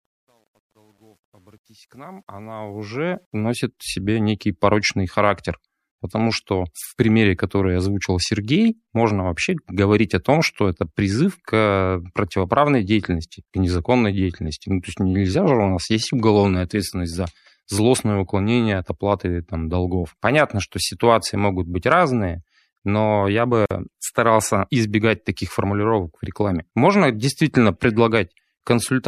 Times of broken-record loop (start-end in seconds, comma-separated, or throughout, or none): none